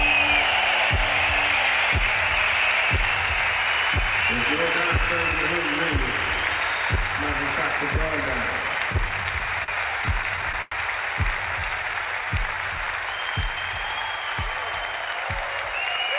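From 8.78 to 10.73 s, packets arrived late again and again, so the jitter buffer kept running dry. These repeated stalls (stutter) were bridged by stretching the last sound, about 260 ms in all, with the longest hold near 97 ms. Nothing is lost, but the audio hitches and drags.

From 11.46 to 12.85 s, a jitter buffer slow-down refilled a depleted reserve by repeating single pitch periods. That adds 152 ms, so the sound plays at 90% speed with unchanged pitch and drawn-out stretches.

From 14.71 s to the end, a jitter buffer speed-up trimmed excess buffered delay, cutting about 150 ms in short pitch-period pieces. The sound runs at 110% speed and feels hurried, though the pitch holds.

Throughout, the audio carries nothing above 4 kHz, which fits a G.711 mu-law call path.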